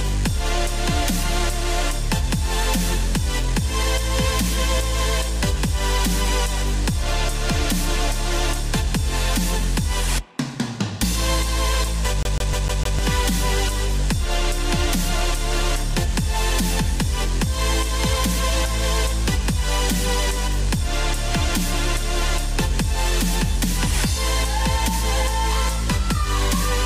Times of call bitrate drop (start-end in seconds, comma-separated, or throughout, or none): none